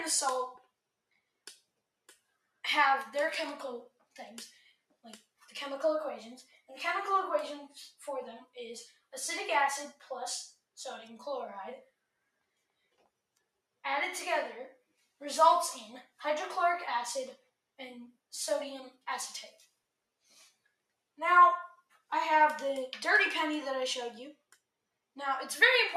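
A noise suppressor misjudged parts of the audio as noise and turned them down, so the sound is cut by the noise suppressor at 4.9–5.45, 6.45–6.69, 8.9–9.13 and 19.52–19.67 s, sinking by about 14, 8, 14 and 6 dB.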